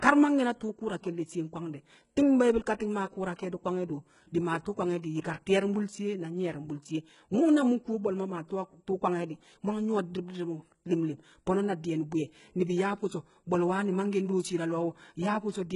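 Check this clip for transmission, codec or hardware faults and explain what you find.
The speech shows two codec faults: heavy compression damage throughout, and one pre-echo.

HE-AAC compression, throughout: nothing is present above 11.1 kHz, and the upper band sounds synthetic, with gritty, lispy sibilants. The likely cause is spectral band replication, which copies lower bands upward, leaving harmonics misaligned across the crossover. The heavy damage points to a very low bitrate, around 12 kbps.

Pre-echo, from 5.22 to 5.24 s: a short hiss spreads about 28 ms ahead of a sharp onset, and the onset sounds softened. The transform block containing the attack distributed its quantisation noise across the quiet stretch before the attack.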